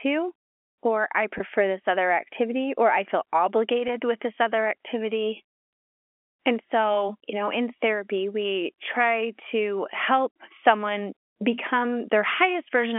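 Packet loss with pitch repetition shows up at 1.38 to 1.40 s after "or I", then at 3.88 s before "with this other activity": about 20 ms and 10 ms gone, each patched by repeating the last pitch period into a brief buzzy hold over the telephone-band G.711 sound.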